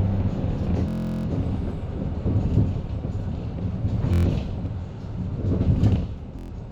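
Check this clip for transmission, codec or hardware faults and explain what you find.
Three Bluetooth stutters break up the sound, all from one cause.

Bluetooth stutter at 0.88 to 1.27 s: about 372 ms of data went missing, so the receiver kept replaying its last short slice, roughly 23 ms long. That is consistent with about 16 lost frames and produces a buzzing, machine-gun stutter before playback jumps ahead.

Bluetooth stutter at 4.14 to 4.26 s: 116 ms lost, so the same slice repeats briefly as a short rattle, which suggests about five missing frames.

Bluetooth stutter at 6.39 to 6.51 s: another 116 ms gap, heard as another brief repeat-buzz before the sound resumes further on.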